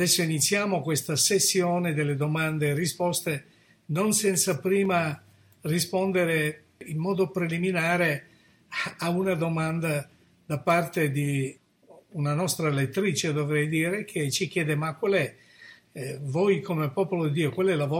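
A dropped buffer (overrun) occurs at 4.85 s, heard as a point where the sound jumps abruptly forward. There is no gap of silence; the material on either side is butted together with a short stretch missing, around 15 ms. The likely cause is the recording software failing to read its audio buffer before the hardware wrote fresh samples over it, so that slice was lost and playback simply skips past it.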